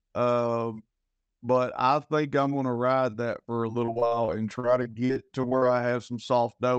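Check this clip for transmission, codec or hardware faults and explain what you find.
One transmission fault is present: repeated packet loss (robotic sound), from 3.85 to 5.64 s, starting just after "ride that for a". Packets went missing in quick succession, and each hole, up to 46 ms, was filled by extending the preceding sound. About a fifth of the stretch is this concealment, so the speech turns choppy, with fragments dropped. The call codec's upper limit is around 8 kHz.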